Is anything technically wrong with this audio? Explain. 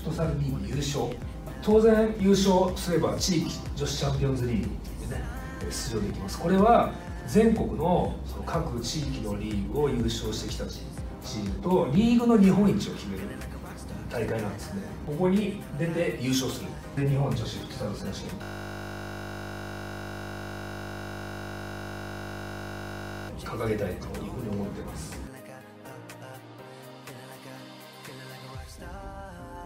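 Yes, there's a system hang loop from 18.43 to 23.29 s. Playback froze and the hardware kept replaying the same 20 ms chunk of buffer, about 240 times over, so the audio becomes a steady 50 Hz buzz instead of moving on.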